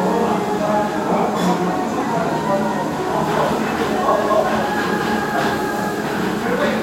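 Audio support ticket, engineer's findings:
No audible fault found. Nothing to action.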